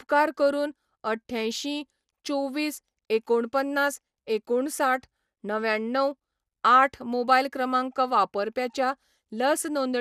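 Speech with generation loss throughout: a swirly, hollow smear and blurred attacks, with nothing above 15.3 kHz. It is worse than one pass at that bandwidth would give, pointing to repeated encoding, likely about four passes of MP2 at around 96 kbit/s, rather than a single low-bitrate encode.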